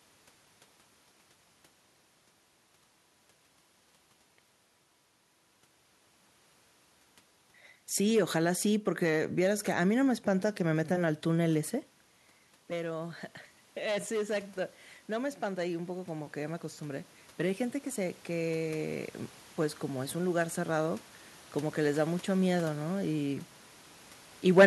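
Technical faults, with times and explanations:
13.84 to 22.22 s, automatic gain rising: after the talker moves back near 11.5 s, input falls about 11 dB and the gain control slowly restores about 9 dB. Room noise swells with the voice, unlike a talker simply coming closer.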